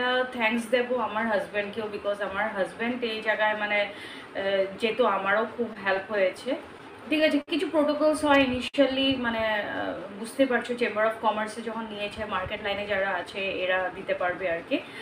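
From 5.73 to 6.47 s there are scattered short gaps: about four tiny lost-packet holes, the longest around 15 ms, each patched by continuing the sound, leaving brief ticks or smears rather than one held sound. At 7.42 to 7.49 s and again at 8.68 to 8.76 s comes a short stall from a late packet. The jitter buffer ran dry, so the last sound is held for 59 ms and then 57 ms before resuming where it left off. Each is a single drawn-out hold, not a cluster of ticks. From 9.94 to 10.33 s a jitter buffer slow-down repeats pitch periods to rebuild reserve, running at 91% speed and adding 46 ms, so the sound drags without any pitch drop. From 12.47 to 14.45 s a jitter buffer speed-up trims short pieces to shed excess delay, running at 107% and removing roughly 150 ms, so the sound hurries over a longer stretch at unchanged pitch.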